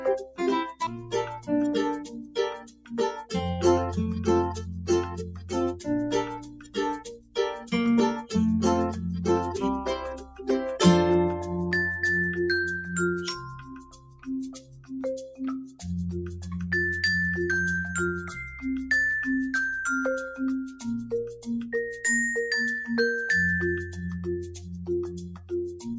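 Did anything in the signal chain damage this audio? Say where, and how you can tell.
Yes. The damage happens at the call-processing stage: a noise suppressor applied to music or sounds runs through the whole clip. It is tuned for speech, so it treats sustained tones, ambience and reverberant tails as background noise and keeps adjusting its gain against them. The level of that material keeps rising and falling by roughly 10 dB. The band stops near 8 kHz, which is normal for a call's microphone path.

Within that, the sound is cut by the noise suppressor at seven points: 0.0–3.34 s, 4.68–8.33 s, 10.14–10.49 s, 13.36–14.92 s, 15.66–15.84 s, 18.45–18.63 s and 24.46–25.86 s. The deepest drops are about 18 dB in the first two spans, about 14 dB at 13.36 s, about 11 to 12 dB at 10.14, 15.66 and 24.46 s, and about 5 dB at 18.45 s. Steady or decaying material sinks or has its tail cut short, while sudden onsets pass.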